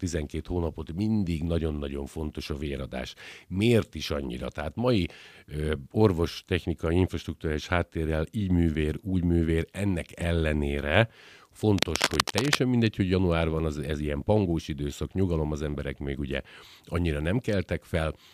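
A worn cable or connector was likely moved from 11.78 to 12.55 s, just before "mindegy hogy január van", making its contact resistance flicker rapidly. The result is cable scratch noise: a thick, irregular crackle and rustle, roughly as loud as the speech, spread across it.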